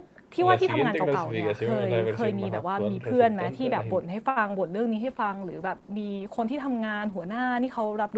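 At 4.29 s a short stall from a late packet begins. A packet missed its slot and the jitter buffer ran dry. The receiver held the last speech sound for 68 ms, until 4.38 s. Nothing is lost, but the sound drags, with a slight buzz or dip.

A short concealed packet loss follows from 4.48 to 4.51 s. About 20 ms of audio never arrived in time. The decoder extended the preceding sound to bridge the gap, then blended back. It is heard as a brief smear or wobble.

At 4.97 s a call bitrate drop sets in and lasts to the end. The Opus encoder fell from 32 to 14 kbps for about 3.2 s. The speech turns coarser and watery. Above the call path's usual 8 kHz ceiling, nothing is heard.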